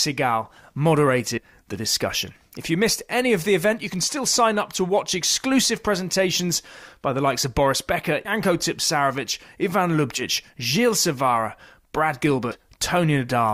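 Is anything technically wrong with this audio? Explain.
Yes, the speech has compressed frames skipped in four places: 1.37–1.41 s, 8.25–8.31 s, 10.17–10.23 s and 12.51–12.56 s. Whole chunks of the encoded stream never get played, either missing or thrown out by the decoder as damaged, so the audio leaps forward by roughly a tenth of a second, a bit less at the last two. The jump sizes fit a 20 ms frame.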